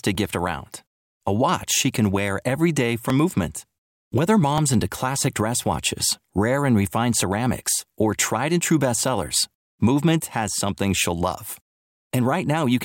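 From 0.15 s to 11.96 s the speech carries a regular click every 1.48 s, about ten in all. These are clock drift buffer slips, likely from two devices on separate clocks, around 0.1% apart. Each slip drops or repeats a short block of samples.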